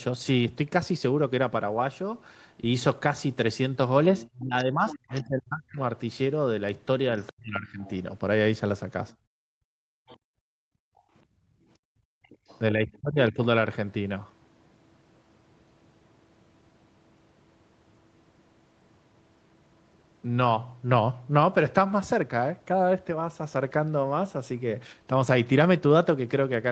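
A speech recording from a call has three kinds of echo-canceller fault. Other side's voice leaking through is audible from 4.2 to 5.19 s, 7.27 to 7.9 s, 10.07 to 10.17 s and 12.3 to 12.97 s, likely because the loudspeaker playback reached the microphone and was not fully cancelled. The leaked voice sits well under the main talker, from roughly 15 dB below at first down to about 30 dB below by the last stretch. On a spectrogram it shows as faint second harmonic stacks threaded beneath the louder ones. Speech suppressed in double talk follows the leakage closely, at 4.32 to 5.79 s, 7.11 to 7.79 s and 12.73 to 13.39 s. The talker's level sinks by about 30 dB, and by about 40 dB in the middle event, for roughly a second in the first case and about half a second in the others. The likely cause is that both sides spoke at once and the canceller turned everything down rather than risk passing echo. 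The waveform envelope shows notched, choppy gaps, and the spectrogram shows the upper harmonics thinning. Background gated by the echo canceller runs from 9.14 to 12.45 s. Over about three seconds the room sound is pushed down hard, by about 34 dB at its deepest, while the loudspeaker plays, then comes back. Between phrases the noise floor appears as a dark, nearly empty band on the spectrogram and a flattened trace on the waveform. No content appears above 8 kHz, which fits a wideband Opus call at around 32 kbps after the call's microphone high-pass.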